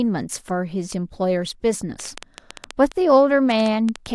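Speech with a train of clicks from 2.00 to 4.07 s: about fifteen unevenly spaced pops, roughly 7.3 per second, peaking near 10 dB above the speech. They show as sharp waveform spikes and thin vertical spectrogram lines, likely interference from nearby equipment or a faulty connection or power supply.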